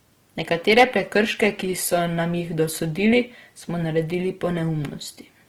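Speech, with plainly audible codec damage throughout: the voice comes out noisy, rough and grainy. This is most likely Opus compression in its music (CELT) mode at a low rate, which fits something around 16 kbps. The coder preserves the energy in each band but rebuilds starved bands from folded or noise-like content. On a spectrogram the bandwidth stays full, reaching about 20.1 kHz, but the upper region looks smeared and speckled rather than finely structured, without the sharp holes an MP3 would leave. From 0.71 to 0.84 s there is hard clipping, with the signal pushed roughly 6 dB past what the stage could pass, so peaks are sheared off flat. It is heard as a short harsh crackle or fuzz on that loud stretch. In the waveform the tops and bottoms sit pressed against a fixed ceiling, and a spectrogram shows a brief burst of added harmonics spreading far up the spectrum.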